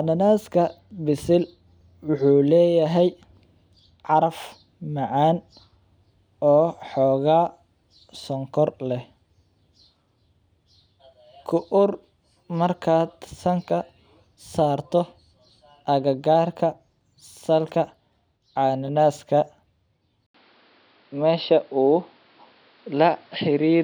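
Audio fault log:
20.26–23.83 s, likely input switched to a poorer device: after an 80 ms gap the sound turns boxy, nothing above 5.4 kHz, level shifted by about 5 dB, faint new background noise.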